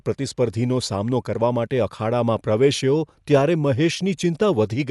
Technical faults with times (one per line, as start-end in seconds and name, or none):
0.00-4.91 Dolby Digital compression